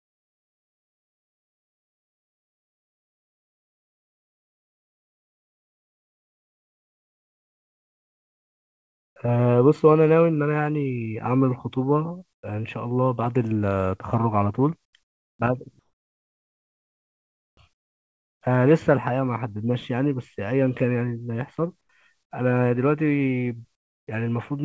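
From the start to 9.16 s, the sender's voice detector likely judged the opening to be silence and stopped sending real audio, so the receiver filled the gap with synthetic noise. This is comfort noise in place of the background: the genuine room sound gives way to a flat, featureless hiss about 28 dB quieter, with none of the original background's texture until speech arrives.

From 9.18 to 9.44 s, the jitter buffer ran short of audio and stretched what it had by repeating pitch periods many times over, adding 38 ms. This jitter buffer slow-down plays that stretch at 88% speed with unchanged pitch, so sounds drag.

From 9.73 to 10.02 s, the jitter buffer held more audio than it wanted and trimmed short pitch-period chunks to catch up, about 50 ms in all. This jitter buffer speed-up runs the passage at 113% speed at the same pitch, so it sounds briefly hurried.

Comfort noise in place of the background returns between later stretches of speech: at 12.33 to 12.43 s, about 25 dB down; across 14.85 to 18.41 s; at 21.81 to 22.31 s; and at 23.75 to 24.07 s, about 21 dB down. 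Each time, the live background is replaced by a smooth, lifeless hiss, and the band stops at 8 kHz, which fits a G.722 wideband call codec.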